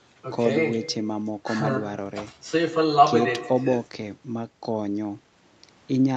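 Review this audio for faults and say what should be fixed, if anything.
Nothing here needs fixing; the speech carries the usual call-chain character, with the top end stopping around 8 kHz as expected for this kind of call path, and no faults turn up anywhere in it.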